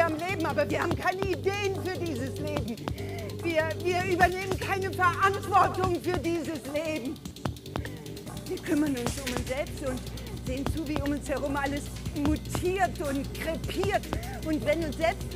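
At 10.28 s there is a brief burst of damaged data in a compressed stream, lasting only about 8 ms. A short run of the encoded bitstream arrives corrupted, so the decoder cannot interpret the affected frame correctly and briefly loses its place, resynchronising at the next valid frame header. The result is a sharp, momentary blip or chirp that cuts across the audio and does not belong to the underlying sound.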